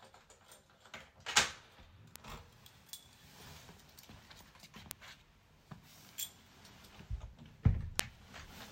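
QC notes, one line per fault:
2.16 s, bit error spike: a single flipped bit throws one sample off by a power of two and back, giving a brief sharp tick peaking at about -17 dBFS, broadband and unrelated to the surrounding sound.
4.91 s, bit error spike: another lone corrupted sample, louder at about -10 dBFS, so the tick stands out more.
8.00 s, bit error spike: the loudest, at about -4 dBFS, and slightly fuller, which fits a short run of about three bad samples.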